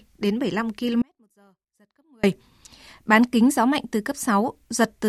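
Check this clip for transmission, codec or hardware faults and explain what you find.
There's one fault, an audio dropout to a faint residue from 1.02 to 2.23 s. The speech cuts out abruptly for about 1.2 s, leaving only a faint trace roughly 35 dB down. The likely cause is the signal being lost while the path downstream stayed live.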